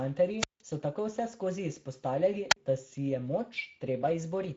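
Speex codec coding runs through the whole clip. The speech is hoarse and grainy because the codec has too few bits to rebuild the excitation faithfully, which points to a setting around 16.8 kbps. Nothing is present above 7.7 kHz, and the top band is only a thin, noise-like fill.

A wireless microphone squelch dropout hits from 0.38 to 0.62 s. The radio link fades, hiss swells, and the receiver's squelch mutes the output for about 165 ms before the speech returns. A second, shorter one from 2.50 to 2.56 s leaves a hole of about 44 ms.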